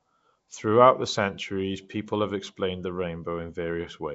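Speech, and the whole thing carries Nellymoser compression: a rough, hissy halo around the voice and a smeared, underwater quality, with nothing above about 7.7 kHz. That's likely the old Flash microphone codec at work, spending a fixed two bits a sample on short blocks and filling the starved bands with noise instead of real detail. The grainy texture fits a rate of around 32 kbps, and the damage is plainly audible from start to finish.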